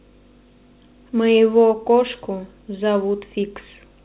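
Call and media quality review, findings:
No findings for call and media quality; the speech reaches the listener over the call path with nothing above 4 kHz, which fits a narrowband G.711 A-law call at 64 kbps.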